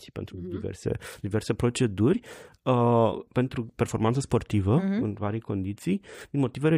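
Listening closely to the speech, nothing stood out as a technical problem at any point.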